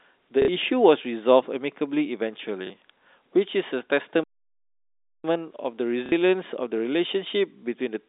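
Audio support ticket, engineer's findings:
Packet loss with last packet repeated: short robotic stutters at 0.42–0.48 s (60 ms) and 6.06–6.12 s (60 ms), a small blip at 2.67–2.70 s (30 ms). Jitter buffer replays the previous packet, fitting 30 ms packets. A buzz near 33 Hz sets it apart from a plain dropout.

Playback stall: speech cuts to silence at 4.24 s and resumes at 5.24 s, a gap of about 1.0 s. Likely cause is a playout buffer underrun or a blocked audio thread. Unlike concealment, there is no repeated audio and no buzz, only dead air.

The line band sits at 250 Hz–3.7 kHz, as expected for G.711 A-law.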